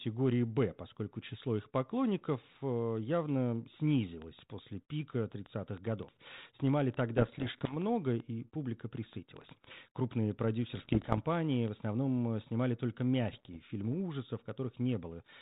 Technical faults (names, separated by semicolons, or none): train of clicks; bit errors on an ADPCM link